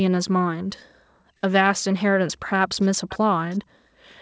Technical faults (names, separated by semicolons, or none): background gated by the echo canceller; echo leak